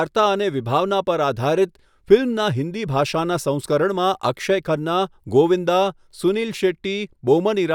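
No technical faults can be heard anywhere in this recording.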